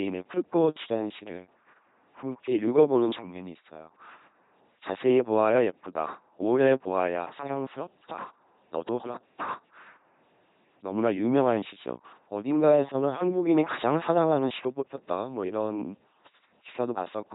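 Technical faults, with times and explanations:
Throughout, LPC-10 vocoder. The speech is rebuilt by a small vocal tract filter driven by either a pulse buzz or noise. Each moment is forced wholly voiced or unvoiced, so it sounds heavily robotic, buzzy and hissy. Nothing lies above 3.9 kHz, which fits a 2.4 kbit/s stream.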